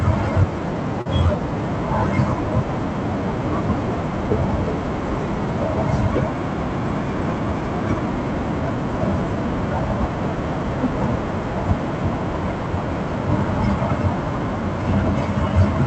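Right around 1.01 to 1.07 s there's a short concealed packet loss: roughly 40 ms of the call arrived too late, so the receiver stretched the preceding sound to cover it. You hear a quick smear before things settle, with the call codec's top end stopping near 8 kHz.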